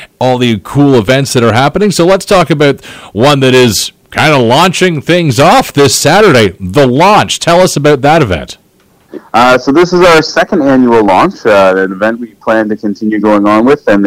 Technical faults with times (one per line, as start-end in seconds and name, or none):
0.00-14.06 hard clipping